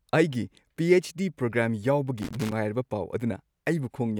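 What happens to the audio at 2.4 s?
Loose connector crackle runs from 2.18 to 2.52 s: a dirty contact chops the speech into irregular scratchy bursts, showing as jagged waveform spikes and broadband vertical streaks.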